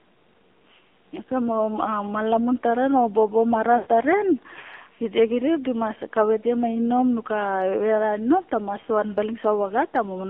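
A speech recording carried over an AMR narrowband mobile codec, squeezed through a 250 to 3400 Hz line band with nothing above 4 kHz. The plainly audible buzzy, synthetic coding fits a low mode around 7.4 kbps, and consonants lose their crispness. Lost AMR speech frames at 3.78 to 3.87 s make the decoder stretch its last good pitch and vocal-tract settings with shrinking gain. The voice smears and fades for about 80 ms, which fits four dropped 20 ms frames, and then returns a little rough.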